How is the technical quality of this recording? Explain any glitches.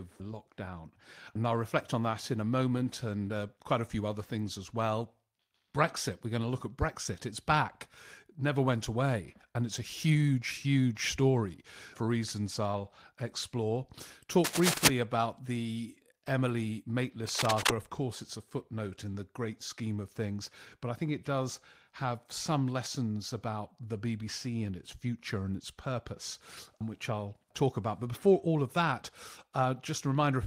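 The recording has a few short glitches: two bursts of scratchy noise and one brief rough patch.

From 14.44 to 14.88 s, between "I'll explore" and "about the", and again from 17.29 to 17.70 s, there's cable scratch noise. That's uneven rustling, a bit louder than the speech the first time and about level with it the second, likely from a worn connector being moved.

At 16.47–16.49 s, just after "about the", there's a lost packet rebuilt from error correction. It sounds like a single packet went missing and the decoder filled 20 ms from the low-bitrate backup copy. There's no gap, just a brief grainy roughness.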